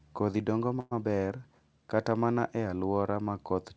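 Speech clip with a call audio freeze from about 0.80 to 0.93 s: the sound stalls and the last bit gets stretched into a fading buzz or hiss for about 111 ms, then a brief silence of about 10 ms before "maber kata mana e" picks up right where it stopped. Nothing is lost, but everything after lands about 111 ms later. Likely cause is packets held up in transit, so the jitter buffer ran dry. The audio has that call-codec sound with nothing above 8 kHz, which fits G.722.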